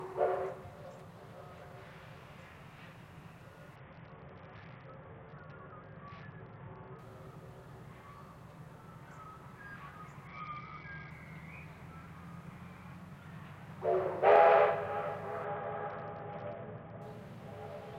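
From 3.76 to 6.99 s, 10.27 to 11.1 s and 15.44 to 17.02 s, a Bluetooth SBC bit pool drop dulls the treble and adds gritty noise. The spectrogram's upper bands go empty, which points to the bit pool falling to about 7 under congestion.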